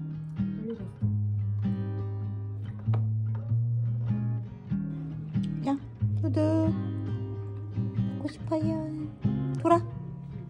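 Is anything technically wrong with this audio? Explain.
No, nothing technically wrong can be heard in this audio. There is no fault to point to at any moment in the recording.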